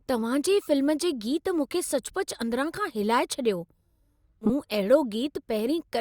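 A speech recording with frames out of order from 4.41 to 4.50 s: two adjacent 40 ms runs swap places, so the stretch plays with its halves exchanged, giving a garbled flutter. Unlike a dropout or repeat, no audio is missing or duplicated, and timing stays intact.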